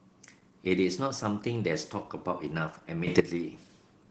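The whole clip carries Opus voice compression damage: the speech is muffled, hoarse and a bit robotic, which sounds like hybrid mode at around 16 kbps. Then from 3.07 to 3.20 s there's a sudden gain jump, with speech and background noise leaping up together by about 12 dB, likely a gain change applied instantly without a ramp.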